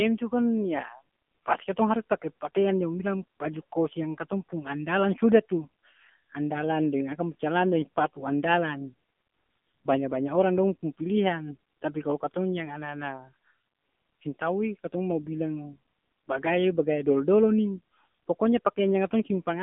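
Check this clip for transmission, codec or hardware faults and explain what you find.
One codec fault runs through the whole clip: AMR narrowband mobile codec damage. The speech sits in a 150 Hz to 3.4 kHz telephone band with nothing above 3.5 kHz. Its plainly buzzy, synthetic texture fits the low 7.4 kbps AMR-NB mode, where a coarse vocal-tract model driven by sparse pulses rebuilds the voice. A plain band-limited line would sound muffled but stay natural, without that buzz.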